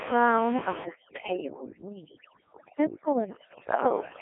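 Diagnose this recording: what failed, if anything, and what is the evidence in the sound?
Codec stage: the Codec 2 vocoder makes the whole clip buzzy and robotic, narrowed to about 300 Hz to 3.4 kHz. The waveform itself is resynthesised, which fits roughly 1.6 kbit/s, unlike plain band-limiting.

Call processing: from 0.84 s to the end, overdone noise removal drops the room noise and breaks it up into twinkling specks, unlike steady codec buzz.

Radio link: from 3.69 s to 3.93 s, bit errors on digital voice radio make the synthetic speech jump in pitch and level and break into warbling bleeps. The burst is brief, unlike continuous vocoder roughness.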